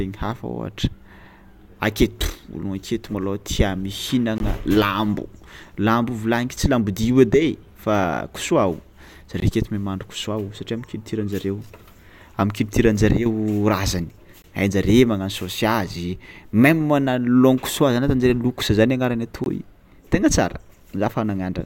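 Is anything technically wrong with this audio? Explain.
Yes. The speech has a gap between chunks at 4.38 to 4.40 s, 9.40 to 9.42 s, 14.42 to 14.44 s and 19.44 to 19.46 s. The audio arrives in 5-second chunks, and a 20 ms stretch of silence sits at each join. No sound is missing. It is simply pushed later. Each gap is a brief dropout, returning at a steady rhythm.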